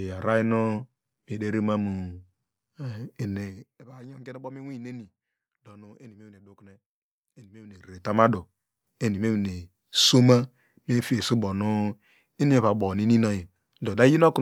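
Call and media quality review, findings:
Zipper noise: fine ticking buzz riding on the speech during a gain drop at 3.34–3.84 s and a matching rise at 7.62–8.18 s. Gain applied in unsmoothed 1 dB steps, around 50 a second, about 20 dB each way; each step clicks.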